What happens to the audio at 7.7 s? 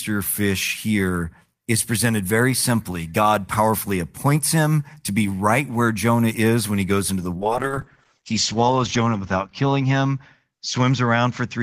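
At 7.7 s the sound is inside a call bitrate drop that begins at 7.36 s and lasts to the end of the clip. The call's bandwidth estimate fell, so the encoder went from 32 to 8 kbps, staying at that lowest rate for 1.1 s, and narrowed the audio band from 20 kHz to 8 kHz. The speech turns muffled and rough. On a spectrogram, energy above 8 kHz is sharply cut off, and the harmonics below look coarser and smeared.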